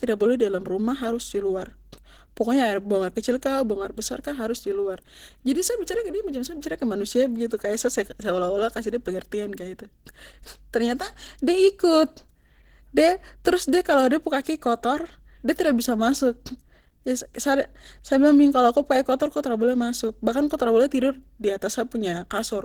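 The speech is rough and hoarse from start to finish, with a grainy, noisy edge on the upper frequencies. The damage is plainly audible. The likely cause is Opus compression at a low rate, around 16 kbps. At this rate the encoder works in hybrid mode. A speech coder handles the lower band, and a transform coder fills the top with folded or noise-like energy. Content still reaches about 20.2 kHz, so the sound is full-band but coarse.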